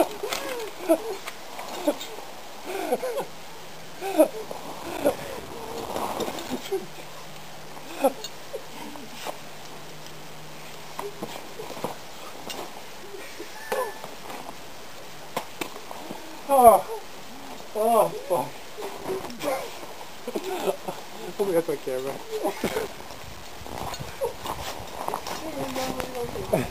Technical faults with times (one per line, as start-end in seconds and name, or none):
4.83-6.53 processor overload crackle
22.65-23.43 processor overload crackle